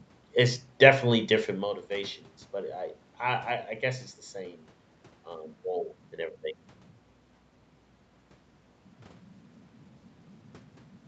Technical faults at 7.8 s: none

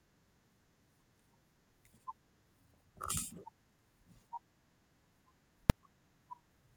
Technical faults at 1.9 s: none

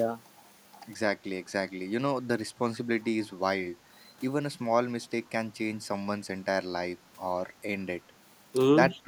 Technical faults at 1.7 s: none

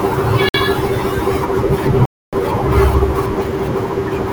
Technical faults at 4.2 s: none

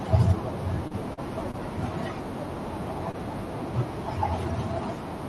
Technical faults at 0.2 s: none

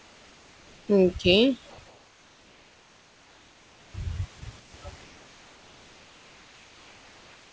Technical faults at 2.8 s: comfort noise in place of the background

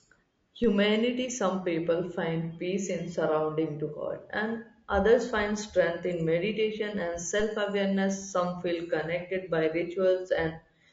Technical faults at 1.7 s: low-delay AAC compression

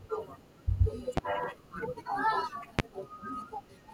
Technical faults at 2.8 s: loud pop

